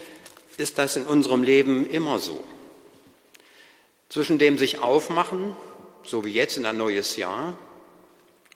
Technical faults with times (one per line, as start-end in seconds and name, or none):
none